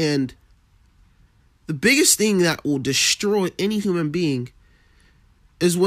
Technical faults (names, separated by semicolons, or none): compressed frames skipped